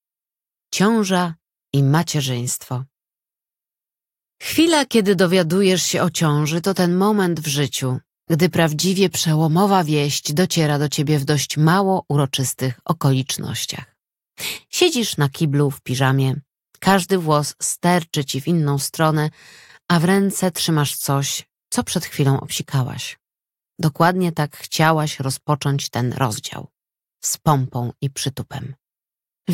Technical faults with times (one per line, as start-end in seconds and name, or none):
none